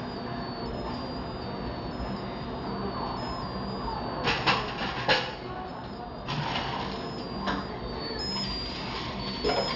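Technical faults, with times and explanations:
Throughout: aliasing. The sound was cut to a lower sample rate with no filter first, which fits a drop to 12 kHz. Content above 6 kHz folds back below it as false tones, roughly 10 dB under the signal, giving a gritty, metallic edge.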